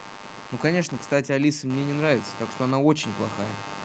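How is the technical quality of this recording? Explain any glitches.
Two things get in the way of the technical quality here. There's a constant computer buzz under the whole speech clip, and a slow gain swell in the middle.

Computer activity noise runs from start to finish: a buzzy, chirpy pulsing at roughly a hundred pulses a second, sitting around 15 dB below the speech. The processor and other hardware shift the shared ground as their load changes, and that leaks into the audio path, following the machine rather than the talker.

Automatic gain rising kicks in from 0.65 s to 3.35 s, lifting the level by about 5 dB. The gain control decided the input was too quiet and turned itself up gradually, so the voice and the background swell together over those few seconds. The band stops around 8 kHz, as you'd expect from the call's microphone processing.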